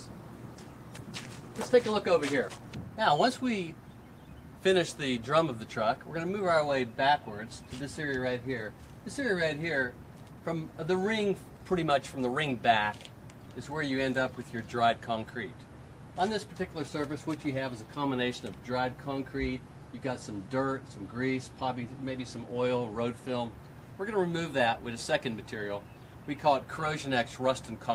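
At 0.97 s playback skips ahead. Roughly 0.7 s of audio vanishes, and the two sides are joined within about 20 ms with nothing filled in. The stretch was discarded while later audio was already queued, so playback lands further on with no pause. Unlike a dropout, there is no silence or concealment noise to hear. The only sign is an abrupt jump in the sound, as if a piece was cut out.

Right after, from 1.11 to 2.97 s, a jitter buffer speed-up runs the audio at about 111%, removing about 0.2 s in total. A second one, from 3.37 to 4.42 s at about 112%, removes about 0.15 s. The buffer had built up more delay than it aims for, so it trimmed many short pitch-period slices to catch up. The result sounds hurried while pitch stays unchanged, which is what separates it from a sample-rate error, where speed and pitch rise together.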